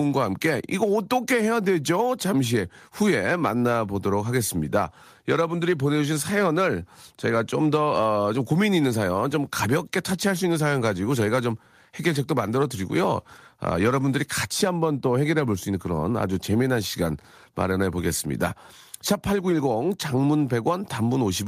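A speech recording with no audible technical faults.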